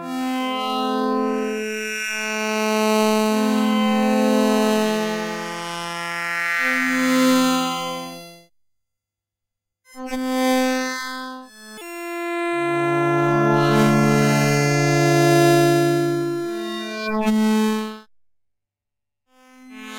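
Throughout the clip, a fine hiss and grittiness rides on the audio, swelling on loud and bright passages and disappearing in quiet gaps. This is sample clock jitter: the converter clock wanders by a few microseconds, so samples land off-time, leaving error roughly 30 dB below the signal.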